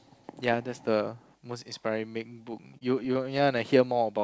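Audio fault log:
2.52 to 3.61 s, repeated stalls (stutter): the speech drags through eight brief halts, about 105 ms in total, none over 27 ms. Packets arrived late, so the jitter buffer kept emptying. Each time the receiver stretched the last sound until it could continue. Nothing is missing.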